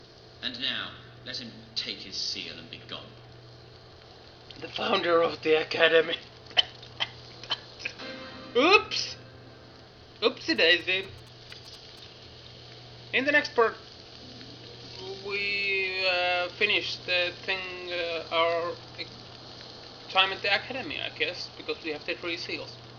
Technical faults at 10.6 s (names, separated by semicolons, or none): GSM signalling bursts